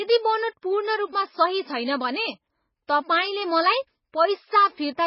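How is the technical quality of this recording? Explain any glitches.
The quality is poor throughout. The speech is dull and watery from start to finish. Nothing comes through above 5.5 kHz. This is likely heavy MP3 compression at a very low bitrate, around 16 kbps. Short of bits, the encoder cuts the treble and drops weak frequency lines. Those lines flicker frame to frame, giving a swirly, metallic edge to s sounds and blurred attacks.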